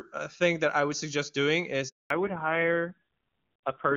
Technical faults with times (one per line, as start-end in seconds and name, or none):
1.88-2.10 handover gap
2.10-3.97 fallback to narrowband